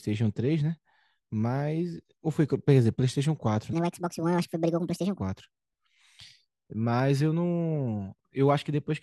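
Between 3.73 and 5.20 s, a wrong sample rate makes this speech run 1.5 times too fast and about 7 semitones higher in pitch. The ratio fits audio captured at 32 kHz and played at 48 kHz without conversion, so the voice sounds high and hurried.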